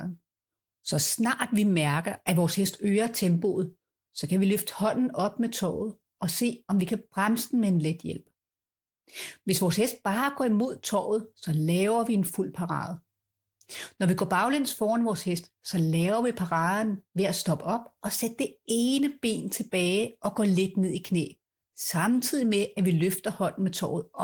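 No technical faults occur anywhere in the recording, so there is nothing to describe in time order.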